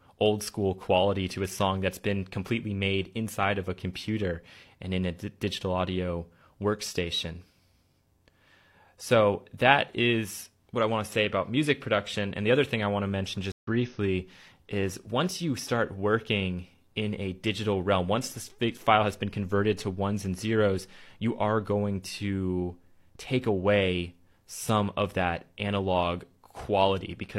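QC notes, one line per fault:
13.52–13.68 s stream reconnect: the connection dropped and the player restarted its decoder mid-stream, so sound goes silent for 114 ms and resumes roughly a tenth of a second further on.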